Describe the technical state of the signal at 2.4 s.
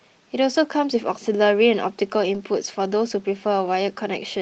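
Around 2.4 s the speech carries a lost packet rebuilt from error correction, spanning 2.33 to 2.39 s. The rebuilt stretch sounds consistent with two packets, about 40 ms, replaced by the low-bitrate redundant copies that Opus tucks into the following packets. The sound never drops out. It just turns briefly rougher and grainier. That continuous but coarser texture separates it from a hard dropout or from packet-loss concealment, which smears or buzzes the preceding sound forward. The call path's 8 kHz bandwidth limit is audible around it.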